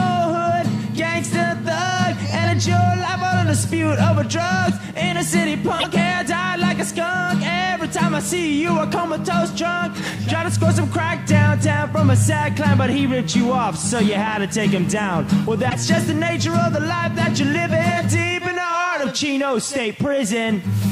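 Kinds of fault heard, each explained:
Broken MP3 bit reservoir: The sound jumps forward and breaks up briefly at 5.79 to 5.85 s and again at 15.69 to 15.76 s. Each disturbance lasts about two to three MP3 frames of roughly 26 ms. The likely cause is missing frames in the stream. The frames that follow then reach back for data they had stored earlier and decode the wrong bytes until the reservoir refills.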